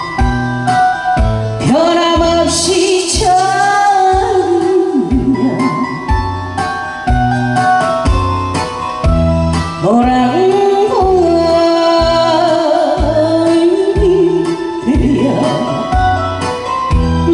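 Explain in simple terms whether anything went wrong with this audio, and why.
Nothing went wrong here: there are no technical faults anywhere in the recording.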